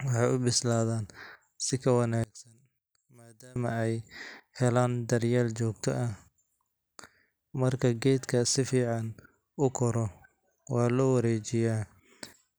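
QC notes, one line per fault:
2.24–3.56 s, one channel inverted: the speech falls by about 25 dB to a faint residue, likely because one side's polarity flipped and the centred content cancelled in the mono sum. Unlike a dropout, a faint difference signal remains rather than silence.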